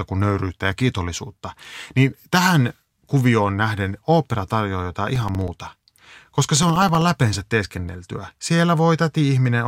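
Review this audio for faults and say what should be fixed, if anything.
From 5.16 to 7.02 s, between "nähden opera tarjoaa jotain" and "läpeensä teeskenneltyä", the speech shows periodic USB or driver dropouts. Every 64 ms a background task stalls the audio path, and about 2 ms of signal is replaced by silence, producing around thirty evenly spaced ticks. The strict 64 ms spacing, audible only under signal, distinguishes this from irregular packet loss or clipping crackle. Find and disable the recurring task that blocks the USB bus or audio driver.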